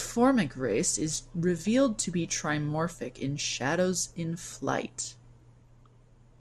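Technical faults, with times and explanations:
throughout MP2 compression: dull, granular speech with a plainly audible gurgle as upper sub-bands switch off and on, likely from MPEG Layer II coding at roughly 80 kbps, not steady filtering.
1.62–1.67 s DAB burbling: after "race is" and before "to be trimorphic in", a brief burst of noise blips in single sub-bands where bit errors got past error correction into the MP2 data across 4 frames, unlike compression's constant dullness.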